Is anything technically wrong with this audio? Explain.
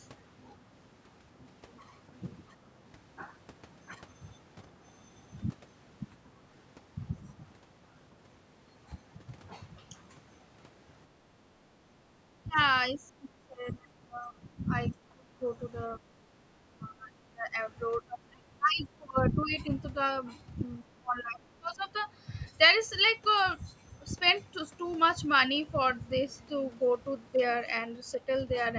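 Yes, the speech keeps getting ducked between 11.6 and 21.9 s, at 11.64–11.98, 12.42–12.58, 12.93–15.41, 15.96–17.53, 18.06–19.72 and 20.83–21.87 s. It sinks by up to about 25 dB, most likely speech suppressed in double talk, where the echo canceller mistook it for loudspeaker echo while the far side talked. The call microphone processing is working normally, with nothing above 8 kHz.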